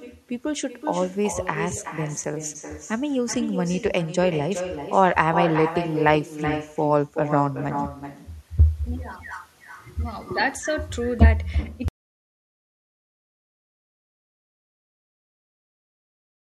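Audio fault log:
Throughout: echo with no canceller. Every phrase returns as a quieter, thinner copy about 9 dB below the speech and around 0.4 s late. The far end's loudspeaker output is reaching its microphone and coming back over the network without being cancelled.
11.88 s to end: audio dropout to silence. The speech cuts off mid-flow and the remainder is digital silence with no room tone. The input was likely lost, through a disconnected device, a failed link or a mute, while the recorder kept writing silence.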